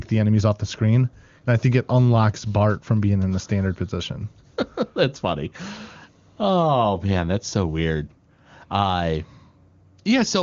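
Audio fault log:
No faults are heard anywhere in the speech. The band stops at about 7.1 kHz, as expected of the AMR wideband (HD Voice) codec, and the near-absence of coding roughness fits its highest rate, 23.85 kbit/s.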